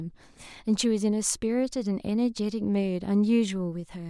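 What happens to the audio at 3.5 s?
At 3.5 s the speech carries on cleanly, with no dropout, click, distortion or other fault at that moment.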